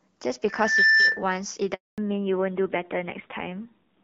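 From 0.48 s to 1.24 s a loudspeaker feedback squeal rises at 1.8 kHz, swelling over under half a second to roughly 10 dB above the speech. The microphone is re-capturing its own loudspeaker with loop gain above one. A spectrogram shows a single bright horizontal line thickening as it grows.

At 1.74 s a handover gap cuts the speech to silence for 240 ms, until 1.98 s. No speech frames arrived while the call switched networks, so that stretch is lost. The waveform collapses to a flat line, and the spectrogram shows a blank vertical band.

From 1.98 s to the end there is a fallback to narrowband. Before the gap the speech carries the light coloration of AMR wideband (HD Voice). Afterwards it sounds duller and rougher, consistent with an older narrowband codec at a rate around 7.4 kbit/s. On a spectrogram everything above 4 kHz is cut off abruptly at a hard ceiling.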